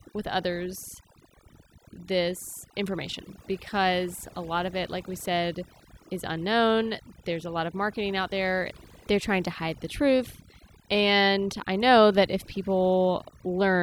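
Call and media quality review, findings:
Overdone noise removal throughout. Background drops, breaks into twinkling specks. Denoiser too aggressive: bands near noise estimate gated off, quiet speech detail lost.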